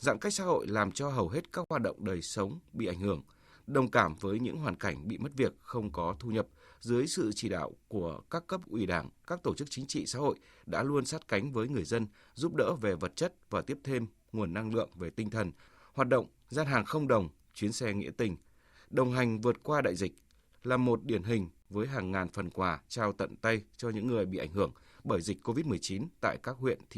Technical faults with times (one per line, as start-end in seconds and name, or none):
1.64-1.71 Bluetooth stall
21.62-21.66 Bluetooth stall